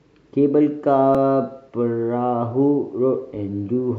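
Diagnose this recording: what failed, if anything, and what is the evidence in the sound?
A dropped buffer (overrun) at 1.15 s in the speech is heard as a small jump forward with no gap. The likely cause is a capture-side driver or buffer stage that fell behind the hardware, losing roughly 10 ms and splicing the remaining audio directly together.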